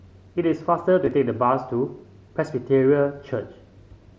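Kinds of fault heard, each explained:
Concealed Bluetooth headset packet loss: between 1.05 and 1.12 s, short pieces of the signal between headset and phone go missing and the receiver fills each gap by repeating a closely matching stretch of the waveform just before it. About 22.5 ms is patched in all, spread over 60 ms, the longest run 15 ms. That gives a brief buzzy smear, not silence or a click, unlike a plain dropout, and distinct from the light mSBC graininess on loud sounds.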